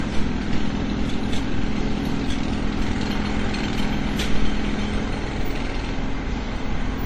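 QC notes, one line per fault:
throughout, transcoding between lossy codecs: the sound carries two layers of coding damage at once, the smeared, metallic texture of a low-rate first pass overlaid with the quantisation grain of a second encoder that is re-coding those existing artefacts rather than clean signal. Nothing remains above 19.5 kHz, the lowest cut-off in the chain. The pattern likely points to an Opus encode at around 32 kbit/s followed by WMA at around 64 kbit/s.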